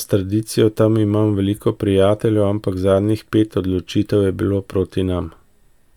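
Nothing in this speech recording points to a technical fault. At no moment does anything interrupt or alter the sound.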